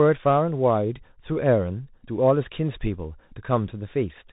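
From start to finish the speech carries Bluetooth CVSD headset codec damage, and it is plainly audible. Everything above 4 kHz is missing, and a grainy hiss sits under the voice. S sounds come out scratchy, and loud bright moments smear because a one-bit, up-or-down encoder can't raise its step size fast enough to follow them. That fits a 64 kbps headset link. A simple telephone band-limit would sound muffled but clean, without this grit or the slope-overload roughness.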